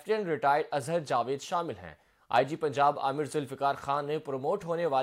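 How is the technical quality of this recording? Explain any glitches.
The technical quality of the recording is sound, with no glitches to explain.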